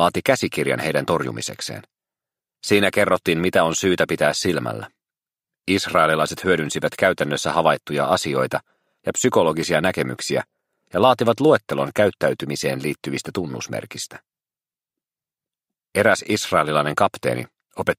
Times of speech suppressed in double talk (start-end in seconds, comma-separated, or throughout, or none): none